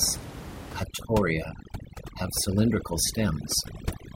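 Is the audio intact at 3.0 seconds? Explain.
No. At 3.0 seconds the audio falls inside a stretch of overdone noise removal running from 0.83 s to 4.16 s. Bands near the noise estimate, set by room noise about 10 dB below the speech, are cut away, leaving speech over near silence with twinkling specks. A spectrogram shows black gaps scattered with isolated bright dots.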